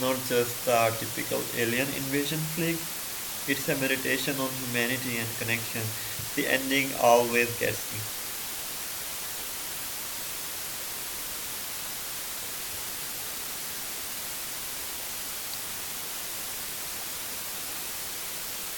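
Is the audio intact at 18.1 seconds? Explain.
No. At 18.1 seconds the speech is carrying low bit depth with dither, which runs through the whole clip. The signal is stored with only 5 bits, and dither added before rounding turns the coarse quantisation error into steady white noise, nearly as loud as the speech itself. It sounds like a constant, even hiss with no distortion. A spectrogram shows a flat, uniform noise floor across all frequencies. The waveform shows a thick noise band that never drops away in pauses.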